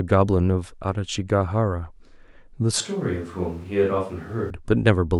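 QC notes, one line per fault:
2.81–4.50 s, switch to a distant microphone: the speech abruptly turns roomy and hollow, thins in the bass and drops about 5 dB, with background noise only roughly 30 dB below it, then snaps back. The close microphone's signal likely dropped, leaving a farther pickup.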